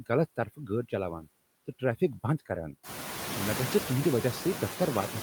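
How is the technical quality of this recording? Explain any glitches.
The recording has one fault, noise suppressor artifacts, present throughout. The suppressor cuts steady noise by about 8 dB in each frame, so the residue pumps between phrases, and the room noise rises by about 15 dB at roughly 3 s.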